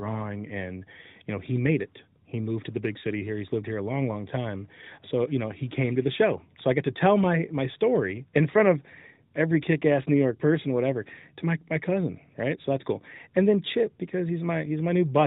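No technical faults are audible.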